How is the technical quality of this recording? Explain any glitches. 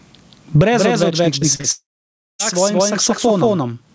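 The recording is pretty rough. It has a constant echo-like double, heavy pumping, and a burst of network damage in the middle. The audio stops at about 8 kHz, which fits a wideband call codec such as G.722 and is normal for that path.

Doubled audio track: throughout the clip, a second full-band copy runs about a fifth of a second behind at roughly the same level, with no decay or room colour. It's likely a second capture path or a misaligned edit holding two copies.

Gain pumping: the level swings by something like 25 dB the whole way through. That's likely input gain set far too high with a fast limiter clamping down, leaving everything squashed.

Short concealed packet loss: this happens at about 1.40 to 1.43 s, then 1.55 to 1.61 s and 1.61 to 1.66 s. Each is a few hundredths of a second that didn't arrive. The receiver patched the gaps by stretching the preceding sound, so you hear brief smears or wobbles rather than clean gaps.

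Long network dropout: from about 1.72 to 2.41 s nothing useful arrives. There's a short fading continuation of the last sound, then roughly 0.57 s of silence before the audio picks up again further on. That's likely a network stall, and that stretch is simply lost.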